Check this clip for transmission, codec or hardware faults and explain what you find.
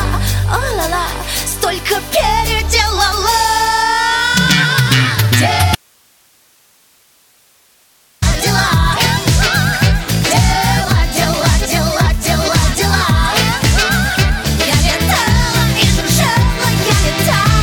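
One fault shows up: an audio dropout to a faint residue from 5.75 to 8.22 s. The sound cuts off abruptly, likely from a signal break with the downstream path still live. Only hiss about 40 dB down remains, visible as a flat, near-empty waveform band and faint broadband spectrogram noise.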